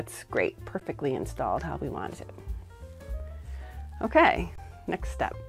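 Two underruns with held sample interrupt the sound: a 13 ms one at 0.80 s and a 21 ms one from 4.56 to 4.58 s, lasting 1024 samples. Each time the output buffer ran dry, the converter held its last value. On a waveform, the trace goes flat at the held value. On a spectrogram, a thin vertical gap appears. With no audio lost, playback resumes where it stopped, so each restart gives only a soft click.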